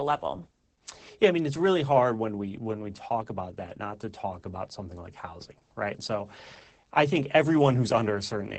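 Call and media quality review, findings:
Opus voice compression throughout the speech. Band stops near 8.7 kHz, so wideband. Plainly audible codec damage: muffled, hoarse, robotic texture from coarse SILK linear-prediction excitation coding. Fits roughly 12 kbps, 20 ms frames.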